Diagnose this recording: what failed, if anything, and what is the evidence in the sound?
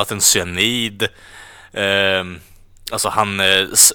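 Hard clipping near the end, from 3.18 to 3.87 s: peaks driven about 6 dB past the converter's limit get sliced flat, giving that harsh crackly fuzz.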